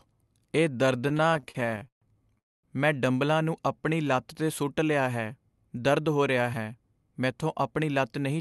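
Speech runs through a call path whose audio is band-limited at 12 kHz, and it suffers four jitter-buffer faults. From 1.09 to 2.38 s there are repeated stalls (stutter). The sound halts and restarts about 19 times. Each gap is filled by stretching out the last sound, and the longest lasts 137 ms. Together the fills add 373 ms, about 29% of that stretch. Nothing is lost. Packets kept arriving late, so the buffer kept running dry. Right after that, from 2.38 to 2.65 s, comes a call audio freeze. The last sound decays, then about 230 ms is near silence. The whole hold is 250 ms. Speech resumes with "ਮੈਂ ਡੰਬਲਾਂ ਨੂੰ" and nothing is missing. The likely cause is delayed packets emptying the buffer, which left the delay 250 ms longer. From 3.76 to 4.04 s there is a jitter buffer slow-down, between "ਮੈਂ ਡੰਬਲਾਂ ਨੂੰ" and "ਲੱਤ 'ਤੇ ਸੁੱਟ ਲਿਆ". The pitch stays put, but the speech drags at 88% speed. Repeating single pitch periods adds 41 ms. 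The buffer was building a reserve after running low or raising its target delay. From 5.99 to 7.33 s there is a jitter buffer speed-up. The speech runs at 110% speed at the same pitch and sounds hurried. About 150 ms is cut out in short pitch-period slices. The buffer had piled up surplus audio and was trimming its delay.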